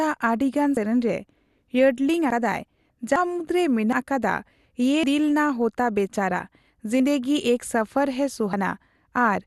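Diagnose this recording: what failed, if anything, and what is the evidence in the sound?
The codec stage is the likely culprit: an MPEG Layer II encoder starved of bits, consistent with MP2 compression at around 80 kbps, shuts off its upper sub-bands and quantises the rest coarsely. The speech sounds dull, with nothing above 12.1 kHz and a gurgling, granular grit throughout.

At the driver or buffer stage, the capture program likely fell behind and the hardware overwrote samples before they were collected, a dropped buffer (overrun). Abrupt skips, no silence, occur at 0.77, 2.30, 3.16, 3.93, 5.04, 7.00 and 8.53 s. Each loses roughly a tenth of a second, the one at 3.16 s somewhat more.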